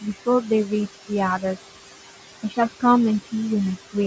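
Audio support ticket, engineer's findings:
Noise suppressor artifacts, whole clip. Background pulled down about 17 dB between phrases, rising back under speech. Component: call noise suppressor gating bands it judges steady. Distinguish from the room noise itself (about 13 dB under speech): the pumping comes from processing, not the room.

Speech cut by the noise suppressor, 2.43 to 2.58 s. Speech drops up to about 12 dB, roughly a tenth of a second sounding swallowed. Mechanism: the same suppressor misread soft speech as noise and attenuated it with the background. Distinguish from a dropout or packet loss: the audio thins rather than going silent or glitching. Distinguish from the normal call band limit (nothing above 8 kHz), which dulls the whole clip evenly.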